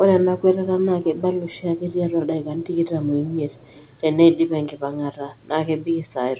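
Faint echo leak at 0.79–0.85, 1.15–1.22, 1.49–1.62, 3.26–3.36 and 3.52–3.91 s: a speech copy delayed 222 ms, roughly 30 dB down (about 35 dB at 1.15–1.22 s), likely from incomplete echo cancellation. The G.711 A-law call path keeps everything under 4 kHz.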